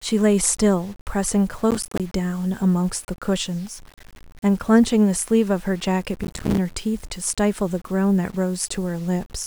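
From the start and throughout, the speech likely went through low bit depth without dither: it was rounded to very few levels, which fits about 8 bits, with nothing to decorrelate the error. The result is a grainy distortion roughly 30 dB below the voice that follows its loudness and roughens quiet syllables.

From 1.71 to 2.00 s and again from 6.24 to 6.58 s, processor overload crackle occurs: the processor repeatedly missed deadlines for buffers of around 5 ms, leaving about 20 and then about 30 hard-edged silent gaps. These are heard as bursts of gritty, tearing crackle riding on the speech.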